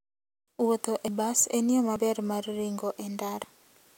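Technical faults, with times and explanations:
1.08 s and 1.96 s, dropped buffer (overrun): Two jumps, each where roughly 40 ms of speech vanishes: one just before "bas en yo", the other between "e bas en yo" and "mar ringo". The likely cause is the program failing to collect its samples before the hardware overwrote them, so the surviving audio is joined with no gap. The waveform shows an abrupt discontinuity, and the spectrogram a thin vertical broadband line where the harmonics jump.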